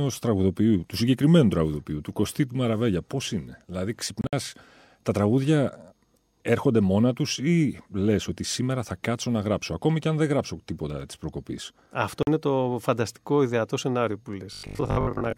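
Between 4.21 and 4.33 s, audio packets were likely not reaching the headphones in time, and the dropped ones left a Bluetooth dropout. About 87 ms of sound vanishes in broken gaps spread over 116 ms, the longest lasting 58 ms. The pattern suggests several lost packets. A second dropout from 12.23 to 12.27 s cuts out 43.5 ms just before "είναι το φανταστικό ιδεατό". Each time the speech stops abruptly and comes back further along, as though it had kept playing through the silence.

From 14.53 to 15.37 s, just after "φανταστικό ιδεατό σενάριο που", new audio likely arrived too rarely. The playback filled the shortfall by replaying its last short buffer, producing robotic sound from repeated short buffers. About half the material is repeats rather than new audio. The repetition imposes a fixed 50 Hz buzz, which fits a 20 ms buffer. The speech turns rigid and metallic while still loosely following its contour.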